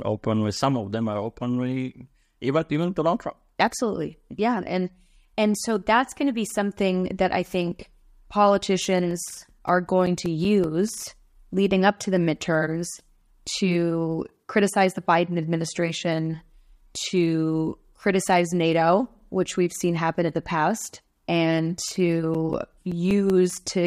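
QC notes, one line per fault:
8.92–11.02 s: CD scratch ticks. Twelve short ticks, close to six per second, as a scratch spoils data once per disc revolution and the player patches or mutes a few milliseconds each time. They vary in strength. On a spectrogram they appear as evenly spaced thin vertical broadband lines; the waveform shows brief notches or spikes.
21.58–23.30 s: CD scratch ticks. The same pattern returns, ten ticks at roughly six per second, each only a few milliseconds long and uneven in strength. They show as regularly spaced vertical streaks across the spectrogram and tiny glitches in the speech waveform.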